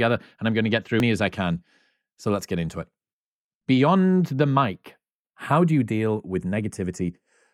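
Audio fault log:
throughout, channels drifting apart: the two channels run on clocks differing by a few tens of ppm, so their offset grows to a fraction of a millisecond. In mono the comb notches slide slowly downward, a creeping flange rather than the fixed hollow tone of a static phase offset.
1.0 s, damaged data in a compressed stream: a short glitch where the decoder misreads corrupted frames, loses sync and hunts for the next frame header.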